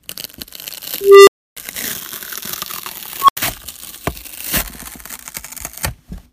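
At 1.01 to 1.57 s and again at 3.20 to 3.37 s, an unstable filter runs away. A tone near 400 Hz, then near 1 kHz, swells over 0.26 s and 0.08 s, clips, and drops to silence for 0.29 s and 0.08 s. Unlike acoustic feedback, it ends abruptly in silence rather than sustaining.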